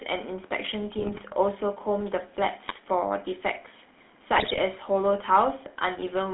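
Speech coded through the GSM full-rate codec, whose pulse-driven vocal-tract model fits a 13 kbps GSM link, leaves a buzzy, gravelly roughness and a band of roughly 200 Hz to 3.6 kHz throughout. GSM bit errors, with flipped bits corrupting the decoder's filter, pitch and gain values, break the speech into squawks, pops and gargling at 0.99–1.23 s, 2.68–2.80 s and 4.36–4.59 s.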